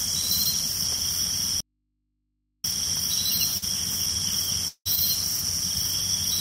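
At 1.61 s the sound cuts off abruptly, and for just over a second, until 2.64 s, only a faint mains hum remains, roughly 50 dB below the normal level, before the audio snaps back mid-flow. This is an audio dropout to a faint residue. The wanted signal was lost while the path after the break stayed live, which points to a likely interruption upstream with the open input still picking up hum.

Around 3.57 s there is a brief smear lasting until 3.64 s, a wobble where the sound seems to hold on to itself for a moment before rejoining. This is short concealed packet loss. About 40 ms of audio never arrived in time, and the receiver covered the hole with roughly 43 ms of synthesised continuation of the preceding sound, then blended back into the real signal.

At 4.68 s the audio turns into a continued buzz or hiss that fades out, followed by about 70 ms of near silence, with the sound resuming at 4.87 s without the missing portion. 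This is a long network dropout. Around 180 ms of audio failed to arrive, likely because of a stall in delivery, and the receiver extended the last sound for about 176 ms before it ran out and went quiet.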